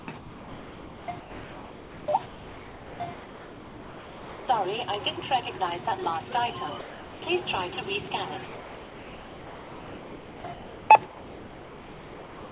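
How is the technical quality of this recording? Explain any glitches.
The quality is poor, with two kinds of fault. Heard through a call path that carries nothing above 4 kHz, the sound is first chopped, then briefly dropped, then chopped again.

From 0 to 4.48 s and again from 8.46 s to the end, the sound is chopped by the voice detector. The sender's detector likely kept toggling transmission, so most of each stretch became comfort noise. The sound has repeated holes where it gives way to comfort noise.

Between those stretches, the sound is dropped by the voice detector at 5.2, 5.58, 6.04 and 8.08 s, each for about 20 ms, and from 6.8 to 7.22 s. The detector likely mistook the sound for background and stopped sending. Those moments give way to steady comfort noise until transmission resumes.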